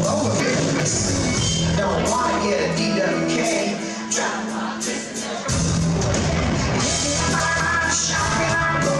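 A brief jumbled, garbled moment occurs from 0.4 to 0.8 s and again from 7.2 to 7.6 s. Both are chunks out of order: in each, one 200 ms chunk arrived one chunk late and plays after its successor, leaving three hard joins.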